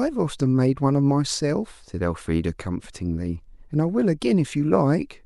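Speech recording with no technical faults detected.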